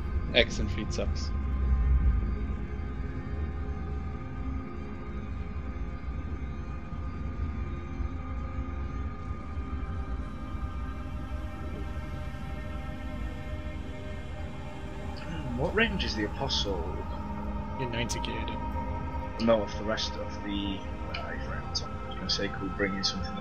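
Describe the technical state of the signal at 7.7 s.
At 7.7 s the signal is intact, with no audible dropout, glitch, distortion or other fault.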